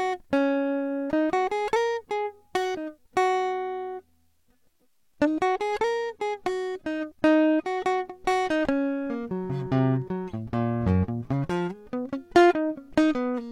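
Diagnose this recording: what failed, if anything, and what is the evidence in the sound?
Network-driven codec switch: an adaptive stream at a lower bitrate. At 3.58 s the music's quality drops abruptly, with no gap, and stays low to the end. Codec artefacts rise, with nothing above 16.2 kHz. This fits a fall from about 96 kbit/s AAC to 32 kbit/s HE-AAC.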